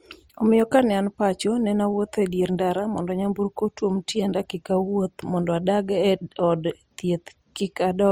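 All the way through, the speech has two kinds of compression grit stacked together: a swirly, smeared texture plus a second, different roughness on top. That points to transcoding between lossy codecs, likely an MP3 near 52 kbit/s re-encoded as Opus around 48 kbit/s, with the top end still reaching 20 kHz.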